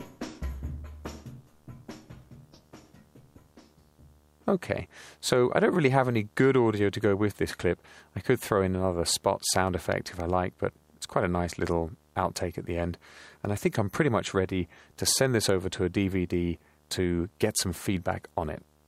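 From start to finish there's a video or display buzz sitting under the audio, a steady 75 Hz buzz with some hash riding on top. A screen or video cable is coupling in at its field rate, roughly 35 dB below the material.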